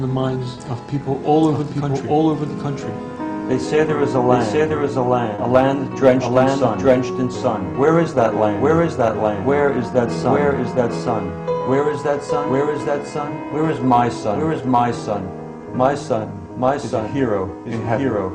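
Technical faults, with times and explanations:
Throughout: doubled audio track, a full-band copy about as loud as the original trails by roughly 0.7 s, likely from a second, slower capture path or an out-of-step edit. The spectrogram shows every pattern repeated 0.7 s later.
Throughout: clock drift between sender and receiver, with the sender running about 1% slow, so the jitter buffer keeps draining and small hiccups recur unevenly. The waveform shows scattered tiny discontinuities.
0.55–0.60 s and 5.35–5.41 s: short stall from a late packet. The buffer ran empty and the last sound was stretched by 20 ms, then 30 ms, with nothing lost. On a spectrogram each appears as a brief smeared, flattened band.
1.31–2.94 s and 4.89–17.69 s: repeated timing corrections. Playback runs at 98% and then 99% speed, adding around 40 ms and 150 ms through repeated small insertions. The waveform shows uneven, repeated slivers that lag the original timing.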